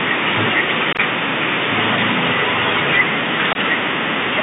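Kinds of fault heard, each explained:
Bluetooth CVSD headset codec: one-bit delta modulation at 64 kbps limits the speech to about 150 Hz–3.7 kHz, with plainly audible granular hiss and scratchy sibilants.
Unconcealed Bluetooth headset packet loss: dropped voice packets leave abrupt silent holes, scattered over 60 ms around 0.93–1.0 s and a 22.5 ms gap near 3.53 s.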